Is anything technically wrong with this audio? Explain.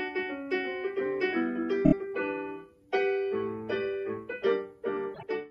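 Yes. Repeated frames appear twice: a single compressed block of about 26 ms was delivered again and again, replaying at 1.84 to 1.93 s (three extra plays) and at 5.14 to 5.23 s (two extra plays). Each is a quick stutter that lengthens the sound by about 78 ms and 52 ms.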